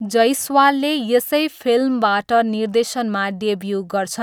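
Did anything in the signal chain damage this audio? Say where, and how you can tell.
No, nothing in the signal chain damaged this audio.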